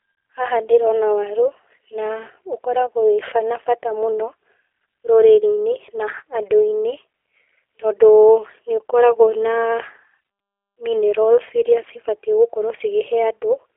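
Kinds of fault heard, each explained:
G.729 codec: Throughout, the speech sounds rough, buzzy and synthetic, cut off above 3.4 kHz and thin below 300 Hz. That points to a low-rate telephone codec near 8 kbit/s, which rebuilds each 10 ms frame from a vocal tract model and a few pulses.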